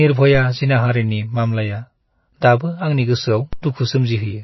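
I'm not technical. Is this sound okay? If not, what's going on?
No, it has two problems. Throughout, the speech sounds watery and swirly. Nothing above about 5.8 kHz comes through, so the crisp top end, like s sounds, is missing. This is plainly audible. The likely cause is MP3 compression squeezed too hard. With too little data to work with, the encoder throws away quieter parts of the sound. Those parts then flicker on and off, and the treble above a fixed point is cut off.

At 3.53 s there is a DC step. The baseline the sound wave sits on suddenly jumps, then slowly settles back. You hear this as a low thump or click, while the speech carries on unchanged. Something like a converter resetting itself, or a signal with an offset being switched in, can cause this kind of jump.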